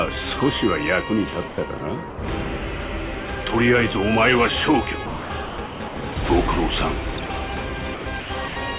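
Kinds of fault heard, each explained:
Sound chopped by the voice detector: The sender's voice detector likely kept switching between sending and holding back, so short stretches of real sound were replaced by synthetic comfort noise. The audio turns choppy: around 1.48 to 1.8 s (about 120 ms filled), 5.06 to 6.16 s (about 600 ms), 7.14 to 7.3 s (about 60 ms), and from 7.94 s to the end (about 310 ms).
Sound dropped by the voice detector: Here the detector likely judged a quieter stretch to be mere background and stopped sending for a moment. The receiver filled the gap with comfort noise, so from 2.1 to 2.18 s about 80 ms of sound gives way to a flat, steady hiss before the audio returns. Throughout, the band stops at 4 kHz, which fits a G.711 call path at 64 kbps.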